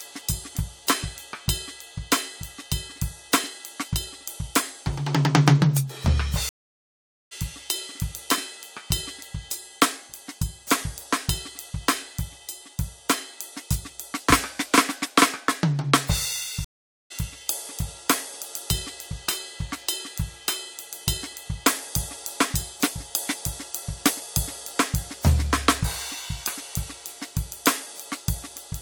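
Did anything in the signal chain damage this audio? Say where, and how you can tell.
Yes, there's a stream reconnect at the network stage, twice. The music drops out from 6.49 to 7.33 s, about 820 ms of silence, and picks up roughly 0.7 s further along than where it stopped. Again at 16.65 to 17.12 s, with 456 ms of silence and a jump of around 0.3 s. The connection broke, the player sat silent, reconnected and spun up a fresh decoder partway into the live stream.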